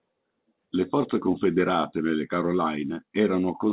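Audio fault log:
No faults found; the speech shows the expected call-path band limit, with nothing above 4 kHz, consistent with G.711 mu-law telephone coding.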